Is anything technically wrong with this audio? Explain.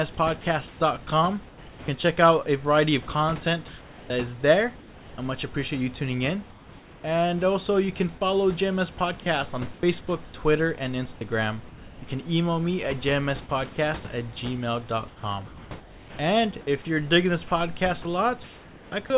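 Yes. Comfort noise in place of the background occurs at 0.68–0.8 s, 3.68–4.1 s (just before "is there I much"), 6.5–7.04 s (between "appreciate you tuning in" and "also you can follow") and 15.08–16.19 s (before "if you're digging this"). The sender likely stopped transmitting during pauses, and the receiver filled them with synthetic noise. The real room background, which sits about 22 dB under the speech, gives way to flat, featureless hiss. That hiss is about 4 dB quieter at the first gap, about 1 dB louder at the second and about 2 dB quieter at the third.

Sound chopped by the voice detector appears at 9.2–10.34 s and 18.02–19.1 s. The detector likely toggled transmission on and off repeatedly, swapping roughly 300 ms and 540 ms of those stretches for comfort noise. The result is choppy speech, with two or more holes in each stretch.

Sound dropped by the voice detector happens at 11.15–11.21 s. 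Quiet speech was likely mistaken for background, so about 30 ms of it vanished under a brief fill of steady noise before transmission resumed. Throughout, the narrowband call path leaves nothing above 4 kHz.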